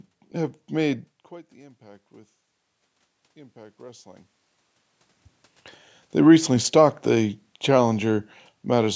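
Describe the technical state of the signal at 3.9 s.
Automatic gain rising runs from 3.34 to 4.33 s. The input level drops by about 24 dB, so the gain control slowly raises its gain by about 4 dB over roughly a second, and the speech and background room noise swell together as it catches up.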